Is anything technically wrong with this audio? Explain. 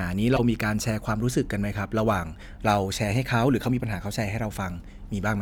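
Yes, there is one fault. From 0.36 to 0.40 s, a corrupt frame is decoded: flipped bits in a few compressed frames were played anyway, so misread gains and codes put energy at the wrong frequencies. It is heard as a brief chirpy burst peaking around -15 dBFS, and a spectrogram would show a sharp, oddly placed smear.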